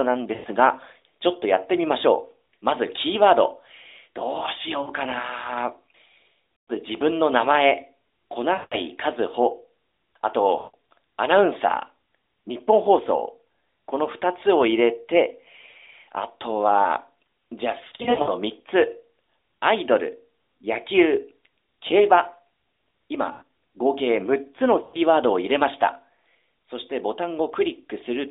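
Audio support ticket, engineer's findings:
Lost AMR speech frames at 0.34–0.46 s, 4.82–4.91 s, 6.56–6.71 s, 8.54–8.76 s, 10.58–10.75 s, 17.88–18.30 s (scattered bursts, longest run 80 ms), 23.32–23.43 s, and 24.84–24.99 s. Symptom: drawn-out buzz fading to silence, then weak, rough onset. Component: radio link into the AMR narrowband decoder, which repeats the last good pitch and vocal-tract settings with decaying gain. Spectrogram: frozen flat harmonics dimming within the 300 Hz to 3.7 kHz band. Waveform: shrinking envelope, short near-gap.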